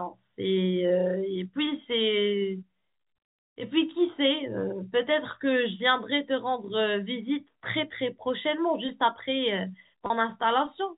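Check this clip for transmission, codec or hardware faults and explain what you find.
One transmission fault appears, near the end. From 10.06 to 10.10 s there is packet loss with pitch repetition. About 40 ms went missing, which fits two 20 ms packets. The receiver repeated the last pitch period to fill the gap, so the sound briefly holds with a slight buzz. The G.711 telephone coding adds only a faint noise floor.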